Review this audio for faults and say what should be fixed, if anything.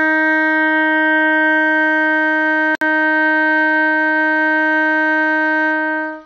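At 2.75 to 2.81 s the music drops into a hard-edged silence of about 62 ms. This is a gap between stream segments. Two segment time stamps fail to meet, and the player pads the hole with silence. Nothing is lost; time is added. Align segment boundaries to continuous sample-accurate time stamps so consecutive segments join exactly.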